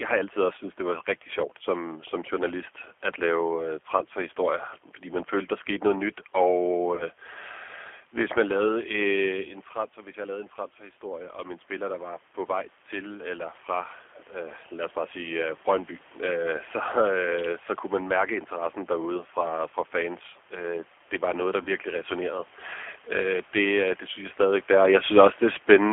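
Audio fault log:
throughout G.729 codec: low-bitrate speech coding rebuilds each frame from pitch and filter, giving a rough, slightly synthetic tone; the spectrogram shows nothing above 4 kHz.
6.95–7.03 and 21.63–21.70 (after "det var noget der") VoIP packet loss concealed by the speech codec: about 30 ms of missing audio, which fits a single lost packet, is filled with a fading extrapolation of the last pitch and filter, buzzy or noise-like, that shows as a smeared, repeated spectral pattern and a sagging waveform envelope.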